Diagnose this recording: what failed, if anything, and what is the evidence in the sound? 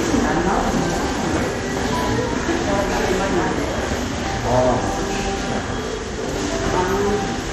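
Across the whole recording the sound is dull and gurgling, with a granular, watery distortion, and nothing reaches above about 13.8 kHz. The failure sits at the codec stage and is likely MP2 compression at a low bitrate, something in the region of 56 kbps. Starved of bits, the encoder shuts off its upper sub-bands entirely and quantises the remaining bands coarsely. That heavy damage produces both the missing top end and the grainy churning texture.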